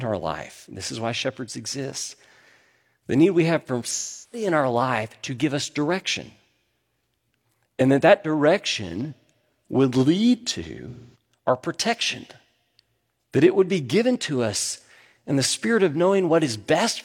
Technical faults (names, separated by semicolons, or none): AAC frame loss with concealment